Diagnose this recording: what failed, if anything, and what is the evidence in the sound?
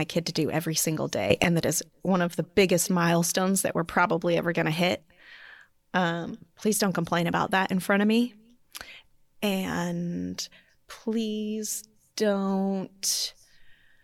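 A sudden gain jump hits the speech at 1.3 s and lasts until 1.44 s. Speech and background noise rise together by about 12 dB, then drop back. The level steps instantly, with no ramp. The likely cause is a digital gain change applied unsmoothed in processing.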